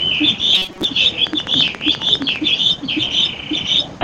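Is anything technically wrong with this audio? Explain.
Yes, there are two faults. From 0.55 to 0.85 s there is robotic sound from repeated short buffers: a rigid metallic buzz near 188 Hz replaces most of that stretch. This is likely a buffer underrun repeating a segment of about 5.3 ms, whose length fixes the pitch. Unlike a click train, it is a continuous tone rather than separate ticks.

From 1.27 to 2.37 s a train of clicks sits over the sound: about 15 evenly spaced, similar pops at 14.7 per second, rising well above the sound, roughly 10 dB. The likely cause is interference or a faulty connection or power supply. Their steady, separate pulses mark them apart from a buzz.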